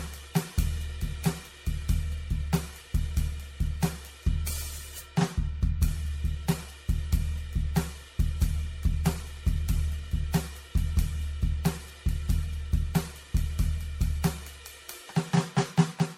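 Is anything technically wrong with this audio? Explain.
Yes. Throughout the music there is generation loss. The sound is swirly and hollow, with smeared transients and blurred attacks, and nothing above 16.5 kHz. The cause is likely repeated MP3 decoding and re-encoding, around seven passes, at a rate consistent with 64 kbit/s. Each pass requantises the signal on a shifted frame grid, so quantisation noise and spectral holes accumulate, making the damage worse than that bitrate would produce in a single encode.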